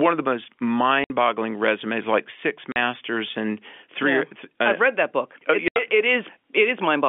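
A speech clip with packet loss filled with silence, heard over a telephone-band line. Three hard gaps cut the sound. At 1.04 s, after "of the most", 60 ms drops out. At 2.72 s, before "and three", 40 ms goes. At 5.68 s, before "it it", 80 ms is missing. All three lengths are multiples of 20 ms, which points to lost 20 ms packets replaced by silence.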